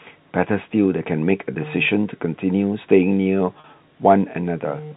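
Speech over a telephone-band line, where packet loss with pitch repetition occurs twice: audio went missing at 1.54–1.56 s and 3.60–3.64 s, and repeated pitch periods fill those 20 and 40 ms gaps with a briefly held, buzzy tone.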